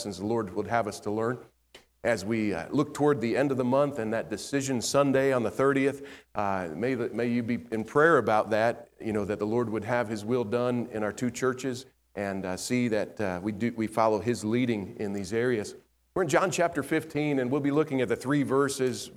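At 15.18 s there is a single sharp snap. It is very brief, a millisecond or so, and sits on top of the sound rather than replacing it. It is fairly quiet, peaking well below full scale. This is an electrical switching spike. The likely cause is a nearby switch, motor or static discharge arcing for an instant, with the audio line picking up that burst of interference as a click.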